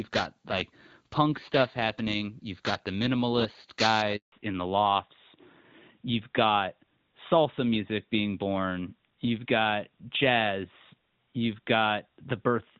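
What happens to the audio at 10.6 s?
At 10.6 s you're in the middle of a fallback to narrowband that starts at 4.32 s, right after "you've got the minimalist", and runs to the end. Everything above 4 kHz is gone, so the speech sounds duller and boxier. That fits the call dropping from HD Voice to something like AMR-NB.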